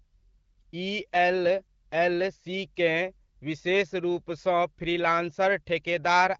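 No faults heard in the speech; the AMR wideband (HD Voice) codec path at 12.65 kbit/s leaves only the light, expected coding character of that rate.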